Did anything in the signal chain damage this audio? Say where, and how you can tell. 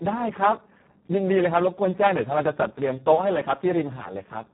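Yes. The damage is in the codec stage: heavy Speex codec coding runs through the whole clip. The speech sounds hoarse, buzzy and close to robotic, which fits a very low setting around 4 kbps where the excitation gets too few bits. Nothing is present above about 3.9 kHz. A plain low-pass or telephone filter would cut the top without the roughness, so the grainy, vocoder-like texture is what points to a starved CELP codec.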